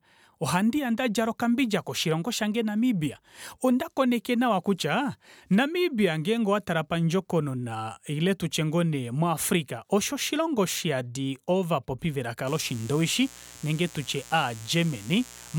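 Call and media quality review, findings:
Steady raspy buzz under speech, 12.47 s to end of clip, roughly 20 dB below signal. Mains buzz: 60 Hz harmonics extending into kHz range. Probable dimmer, rectifier or unshielded line injecting switching spikes twice per mains cycle.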